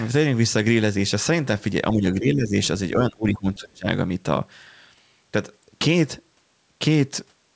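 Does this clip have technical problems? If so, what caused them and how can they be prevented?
Yes. The speech audibly dips in level three times: briefly from 1.93 to 2.03 s, again from 2.19 to 2.56 s, and most severely from 2.96 to 3.87 s, where parts fall by roughly 25 dB and nearly drop out, compared with about 10 dB in the earlier dips. This is likely speech suppressed in double talk, where the echo canceller mistook the talker for loudspeaker echo while both sides spoke and turned the talker down. Better echo-canceller double-talk detection, or a headset that removes the loudspeaker echo, would prevent it.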